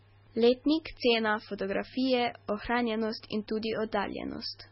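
Throughout, the speech sounds watery and swirly with smeared attacks, likely from heavy MP3 compression at a very low bitrate; a spectrogram shows nothing above 5.6 kHz and flickering, patchy gaps.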